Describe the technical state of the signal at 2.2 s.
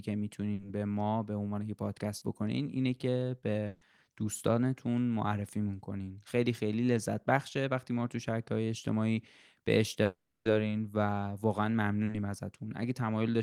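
A brief smear in the speech runs from 2.17 to 2.23 s, the mark of short concealed packet loss: about 40 ms of the call arrived too late to decode, so the receiver extended the preceding sound across the gap and then blended back into the real signal.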